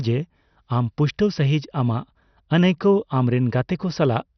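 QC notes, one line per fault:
Throughout, MP2 compression: the speech is dull with nothing above about 6.2 kHz and has a gurgly, granular edge as upper bands flicker on and off. That's likely Layer II starved of bits, which fits a rate around 48 kbps.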